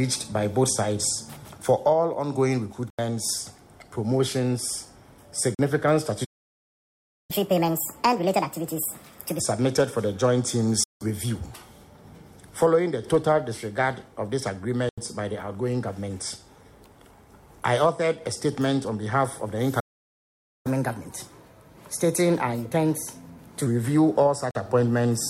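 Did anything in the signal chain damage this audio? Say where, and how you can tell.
Yes. The damage happens at three points in the playback path.

The blocks of digital silence come from the driver or buffer stage. The output drops to silence at 2.90–2.99 s, 5.55–5.59 s, 10.84–11.01 s, 14.89–14.98 s and 24.51–24.55 s. The gaps last 43, 85 and 171 ms, which fits buffers of 2048, 4096 and 8192 samples at 48 kHz that were not filled in time. On a waveform each one is a flat line with hard vertical edges. On a spectrogram each shows as a black column.

The playback stalls sit at the playback stage. At 6.24–7.31 s (about 1.04 s) and 19.80–20.67 s (about 0.85 s) the sound stops in mid-flow. The likely cause is the player's buffer running dry or its thread being blocked. On a waveform these appear as long flat gaps. On a spectrogram they are wide empty bands, much longer than the buffer-sized holes.

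The catch-up at higher speed is the player's resampler working through its backlog after each stall. From 7.31 to 9.40 s the audio runs at 1.5× speed and sits roughly seven semitones sharp. From 20.67 to 23.67 s it runs at 1.15× speed, about two semitones high. On a spectrogram the harmonics shift upward and are squeezed closer together in time over those spans, then drop back to their normal place.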